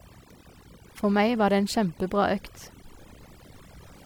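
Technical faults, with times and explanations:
Throughout: overdone noise removal. A noise reduction process set far too aggressively has pulled individual frequency bands down or shut them off wherever their level sat close to its picture of the background noise. The gaps between phrases drop to an unnatural near-silence dotted with twinkling, chirpy specks, and the quieter parts of the speech are stripped away along with the noise. Unlike a low bitrate codec, the damage tracks the noise floor rather than the loudness of the speech.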